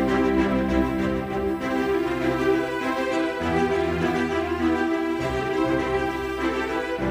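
A USB whine runs throughout: bus-frame current leaking through power or ground gives a fixed 1 kHz tone, strongest near 15 kHz, unlike low mains hum.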